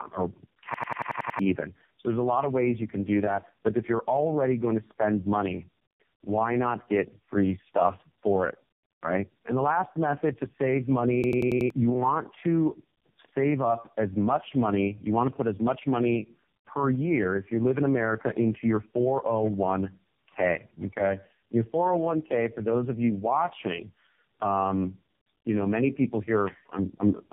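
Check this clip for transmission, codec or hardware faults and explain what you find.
Two faults are present: tandem speech coding across the whole speech clip, and two system hang loops.

Tandem speech coding runs throughout. The speech was decoded and re-encoded at several codec boundaries, with each low-rate coder working on the previous one's damage. It sounds rough, muffled and warbly, with nothing above 3.5 kHz, consistent with a chain ending in AMR-NB.

The system hang loops occur from 0.74 to 1.39 s and from 11.24 to 11.70 s. A driver or system stall left the hardware replaying one ring buffer. A 92.9 ms fragment repeats at 10.8 Hz, seven and then five times, as a machine-gun stutter. This fits a 4096-sample buffer, and it replaces roughly 0.7 s and 0.5 s of audio.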